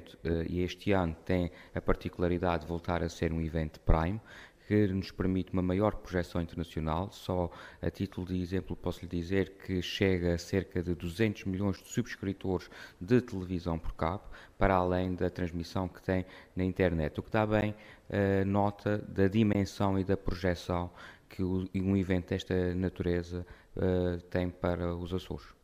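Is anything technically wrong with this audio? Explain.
Yes. The audio has three short blocks of digital silence, at 11.76 s, 17.61 s and 19.53 s, lasting 8.4 ms, 11.6 ms and 16.3 ms. In each, the signal drops straight to silence and returns with no fade, so the two shorter gaps are heard as a sharp tick or small pop rather than a hole, while the 16.3 ms gap comes across as a short hole. The cause is likely samples replaced by zeros when the output buffer wasn't filled in time. The 11.6 ms gap fits a 512-sample buffer. Unlike a plain click or a fade-style dropout, each event is a flat silent run bounded by abrupt edges.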